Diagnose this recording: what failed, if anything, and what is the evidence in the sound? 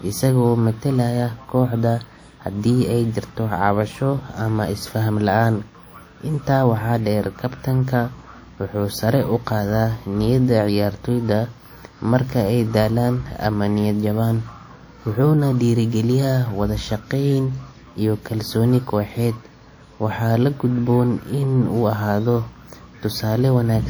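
The fault sits in the codec stage and runs through the whole speech recording: low-bitrate audio saved at a high bitrate. The speech carries the coarse, smeared texture of a low-rate encode even though the final MP3 stream fits a rate near 320 kbit/s. On a spectrogram, energy stops at about 20.2 kHz. The mechanism is likely a low-rate WMA file re-encoded to MP3: the larger second file cannot restore detail the first codec discarded.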